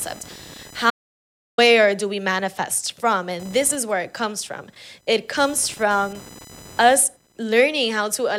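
A buzzing, chirping noise runs under the speech for the whole clip, pulsing around 1 kHz and sitting roughly 25 dB below the speech. This is computer activity noise: processor, graphics or mouse load shifts the shared audio ground, so it follows the machine, not the speech.

From 0.90 s to 1.58 s the speech cuts to dead silence with no room tone, then resumes on "do we manifest from", about 0.68 s of sound gone. This audio dropout to silence likely came from lost input while recording continued writing silence.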